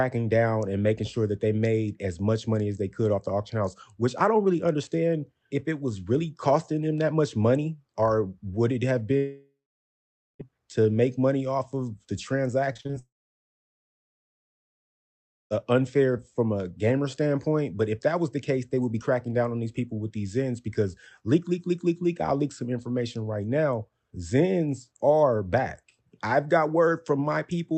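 The audio reaches the listener over a call path with an Opus-style codec whose band stops at about 8 kHz. Long network dropouts, likely from the connection stalling, leave holes from 9.17 to 10.41 s and from 12.99 to 15.52 s: the receiver stretches the last sound into a fading buzz, then roughly 0.85 s and 2.4 s of near-silence follow before audio resumes with the missing stretch gone. Just before the second dropout, repeated packet loss between 12.73 and 12.95 s opens five short gaps, the longest 41 ms, each patched by continuing the previous sound, so over half that span comes out choppy and robotic.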